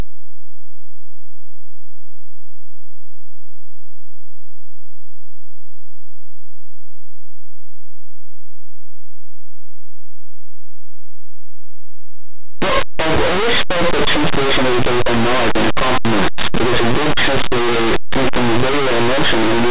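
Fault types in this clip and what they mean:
Linear audio read as companded: the speech was stored as plain linear 8-bit samples but decoded as mu-law codes, so small values just to one side of zero are expanded into near-maximum outputs while those on the other side stay small. The whole clip sounds harsh, buzzy, very loud and distorted. A waveform shows dense, clipped-looking blocks with little quiet space, and a spectrogram shows broadband energy smeared across all frequencies from start to finish.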